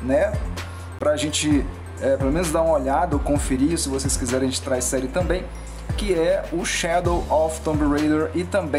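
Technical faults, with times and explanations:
0.99–1.01 s: gap at a join of encoded pieces. The sound drops to silence for about 20 ms, then resumes where it left off. Two separately encoded segments were joined untrimmed, leaving the encoder's start-up delay and final-frame padding as silence with smeared edges.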